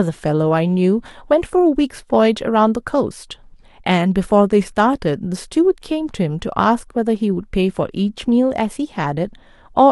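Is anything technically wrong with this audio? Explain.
No, nothing technically wrong can be heard in this speech recording. No point in the clip calls for a closer look.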